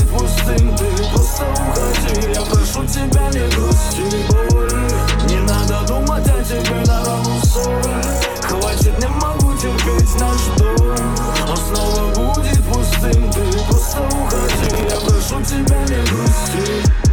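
Processor overload crackle from 14.53 to 14.95 s: around fifteen roughly 5 ms buffers missed their deadlines, replaying stale audio with hard edges, heard as gritty tearing.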